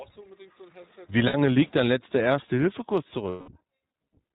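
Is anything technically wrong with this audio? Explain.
Yes. The whole clip carries iLBC codec damage: speech is band-limited to 4 kHz and sounds rough and synthetic, consistent with 20 ms frames at 15.2 kbps, unlike smoother wideband codecs.

Lost iLBC frames occur at 1.28 to 1.35 s (about 60 ms, fitting three frames) and 3.30 to 3.51 s (about 180 ms). The decoder repeats the last pitch cycle with noise, giving a held buzzy vowel rather than silence, with near-instant recovery afterwards.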